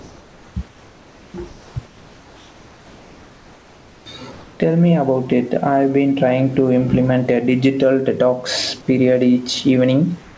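Speech recording, carried over a call path with nothing above 8 kHz, which points to a wideband G.722 codec. Gain pumping runs throughout, with a swing of roughly 10 dB, likely from gain set too high with a fast limiter or compressor clamping every peak. Comfort noise in place of the background occurs at 0.00–0.56, 0.68–1.34, 1.48–1.76, 1.86–4.06 and 10.22–10.38 s. In these gaps the real room background gives way to steady, featureless hiss about 27 to 29 dB below the loud passages and about 2 to 3 dB quieter than the true background. This fits RFC 3389-style discontinuous transmission, where the receiver synthesises noise while the sender stays silent.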